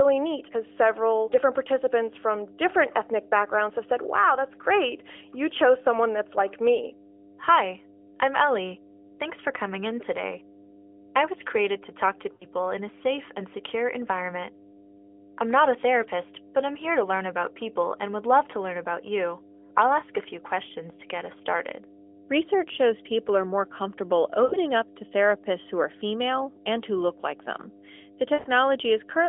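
Mains hum runs through the whole clip. It is a steady 50 Hz tone with low harmonics, strong at roughly 10 dB below the speech. A ground loop or nearby transformer is feeding the power line into the signal.

Lost AMR speech frames hit three times. At 12.34 to 12.46 s, after "created to talk to", 60 ms drops out. At 24.44 to 24.57 s, after "people are more comfortable", 80 ms goes. At 28.34 to 28.48 s, 120 ms is lost. The decoder repeats the last good sound with falling gain, so it smears and fades. The longest gap fades nearly to silence, and the speech returns rough. The light narrowband coding points to a 12.2 kbps AMR-NB link.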